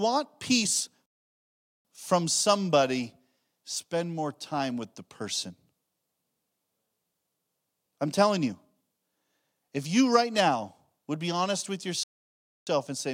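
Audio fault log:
1.06–1.85 s and 12.03–12.67 s, playback stall: the speech halts mid-flow for about 0.79 s, then resumes on "from somebody spend more". It halts again after "would be honest with" for about 0.63 s before continuing with "and say man I". The likely cause is the player running out of data or its thread being blocked, so output falls silent until it recovers. On a waveform these show as flat silent gaps. On a spectrogram they appear as empty vertical bands with abrupt edges.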